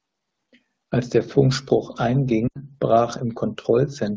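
From 2.47 s to 2.60 s the speech breaks up. These are lost AMR speech frames. Radio errors wiped out 80 ms of audio, which fits four 20 ms frames. The wideband decoder reused its last good settings. The sound drops to near silence fast, then returns weak.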